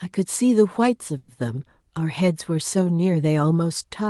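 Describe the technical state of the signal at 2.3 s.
At 2.3 s the speech comes through intact, with nothing beyond the ordinary character of the Opus call path it travelled through.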